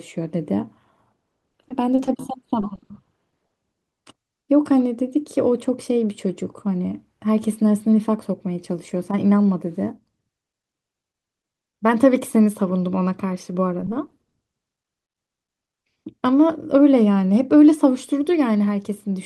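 From 1.40 to 3.52 s the speech turns choppy: repeated packet loss (robotic sound), with short holes, the longest about 50 ms, each patched by stretching the preceding sound, about a sixth of the stretch. The same happens from 13.80 to 15.34 s, with briefer holes of up to 20 ms covering about 12%. The rapid recurrence of the concealment is what makes it robotic, unlike a single dropout or steady codec smearing.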